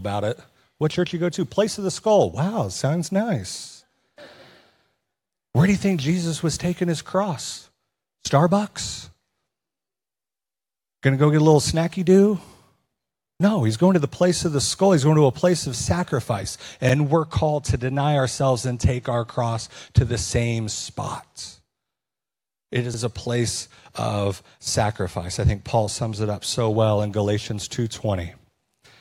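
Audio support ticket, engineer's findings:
Overlapping chunks at 10.84, 16.89, 22.94 s: 50 ms stutter every 6 s. Chunking stage starts each block before the previous ends, replaying speech at joins.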